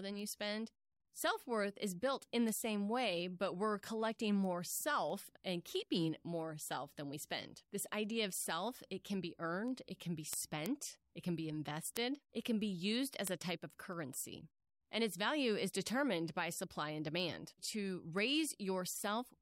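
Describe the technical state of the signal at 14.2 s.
Word clock ticks, 0.19 to 19.16 s: an unlocked receiving clock slips one sample about every third of a second, producing a steady train of sharp ticks.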